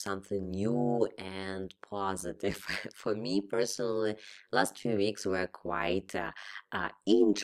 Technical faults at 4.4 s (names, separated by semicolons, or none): overlap-add ripple